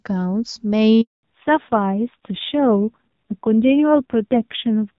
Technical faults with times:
1.01-1.23 handover gap
1.23-4.98 fallback to narrowband

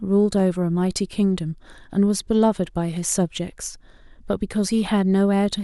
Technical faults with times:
0.40 dropped samples

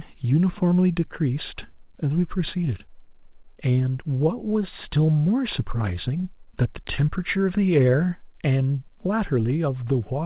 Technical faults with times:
none

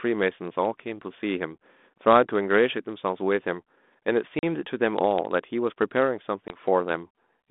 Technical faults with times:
4.39-4.43 packet loss on an ADPCM call
6.48-6.57 packet loss on an ADPCM call

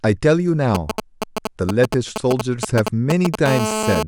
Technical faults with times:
0.75-3.36 GSM signalling bursts
3.46-4.03 GSM phone buzz

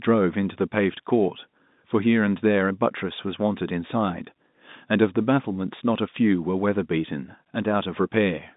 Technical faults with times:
none

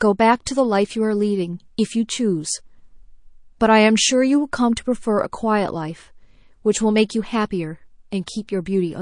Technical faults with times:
0.00-9.02 MP3 compression

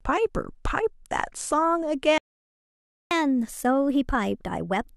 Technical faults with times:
2.18-3.11 playback stall
3.11-4.96 catch-up at higher speed

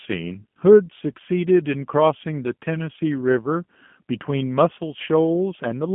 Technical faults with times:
0.00-5.95 G.729 codec

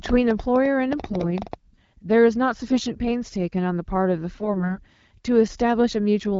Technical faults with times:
0.06-1.54 train of clicks
1.00-1.26 AMR bit errors
2.68-2.81 AMR bit errors
4.34-4.77 AMR bit errors

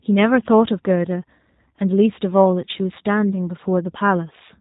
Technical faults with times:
0.00-4.61 G.729 codec

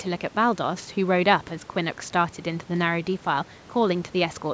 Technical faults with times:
none

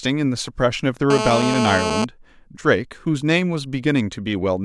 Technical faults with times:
1.10-2.04 GSM phone buzz

